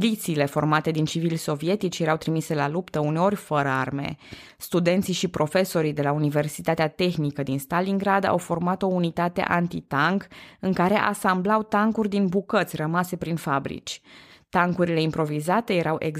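No faults stand out anywhere in this recording; the speech runs without any break or disturbance.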